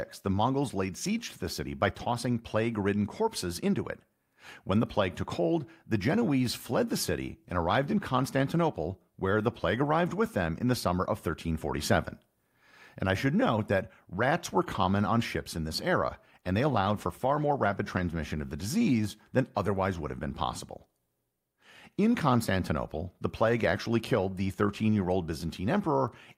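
From 16.74 to 18.13 s there is a call bitrate drop. The encoder starves, so the speech turns coarse and muffled. That fits a fall from 64 to 23 kbps.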